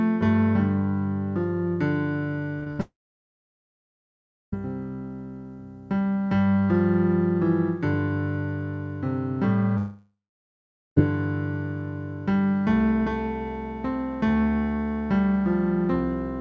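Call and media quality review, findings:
Short concealed packet loss, 2.60–2.64 s and 2.64–2.68 s: two back-to-back smeary wobbles, about 20 ms of real audio missing in each. The jitter buffer's concealment stretched the last sound over the holes, then crossfaded back. That's the lead-in to the bigger mess right after.

Burst of packet loss, 2.72–2.81 s: roughly 60 ms gone in one go. Concealment held the last sound and faded it down, and the audio picks up further along with that chunk simply missing. Runs straight into the dropout below.

Long network dropout (likely cause), 2.81–4.59 s and 9.77–10.98 s: a fading tail, then dead air, about 1.6 s of silence in the first and about 0.8 s in the second. Roughly 1.7 s and 1.2 s of audio lost, and playback resumes further on. Band-limited codec sound throughout, nothing above 8 kHz, which points to a wideband codec like G.722 at 64 kbps.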